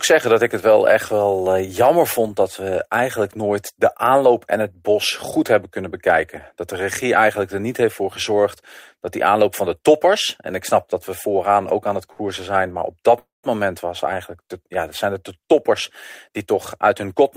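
At 12.12 s, just after "ook aan het", there is a short stall from a late packet. It lasts until 12.21 s. A packet arrived late and the jitter buffer ran dry. The receiver stretched the last sound for about 64 ms to cover the wait. Then the speech resumed where it stopped. Nothing is lost. The held sound is slightly too long, with a faint buzz or dip.

A call audio freeze follows at 13.19 s, after "op dat". It runs to 13.45 s, and the speech returns with "moment was". The likely cause is packets held up in transit, leaving the jitter buffer empty. About 247 ms of filler was inserted. First the last sound carries on as a fading buzz or hiss. Then about 160 ms of it is silence. No speech is missing. A gap has been pushed into the flow.

From 16.29 s to 17.21 s there is a jitter buffer speed-up. The buffer held more audio than its target. To cut the extra delay, the receiver trimmed tiny slices of a pitch period or so, many times in a row. 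In total it removed roughly 70 ms. The speech plays at about 108% speed. The pitch stays the same. The delivery sounds slightly hurried.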